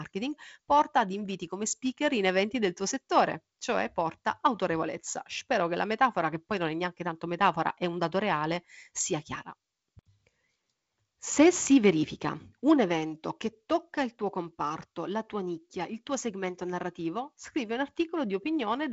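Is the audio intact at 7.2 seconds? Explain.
Yes, the speech at 7.2 seconds is intact, with no dropout, click or other fault, only the light hiss of G.722 wideband telephone coding at 48 kbit/s with nothing above about 7.7 kHz.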